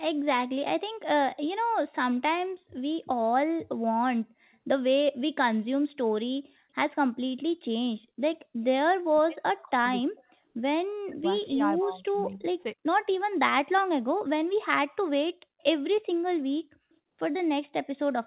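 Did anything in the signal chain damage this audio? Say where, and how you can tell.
Yes. The call's echo canceller likely misread double talk as echo. Speech suppressed in double talk: the speech dips deeply or vanishes at 9.13–9.87, 10.03–10.37, 11.09–11.27 and 11.47–12.47 s.

An echo leak, likely from a loudspeaker end's incomplete cancellation, lets a very faint copy of the speech, delayed by 272 ms, return at 15.59–15.63 s.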